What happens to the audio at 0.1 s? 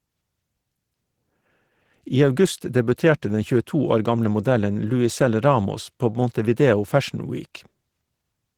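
At 0.1 s you're already hearing Opus voice compression, which runs the whole clip. The speech sounds hoarse and a bit robotic, consistent with SILK-plus-CELT hybrid coding at roughly 16 kbps.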